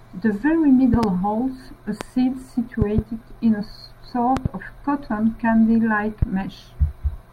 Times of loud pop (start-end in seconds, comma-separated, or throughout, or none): 0.94-1.06, 2.01-2.03, 2.82-3.01, 4.37-4.48, 6.22-6.25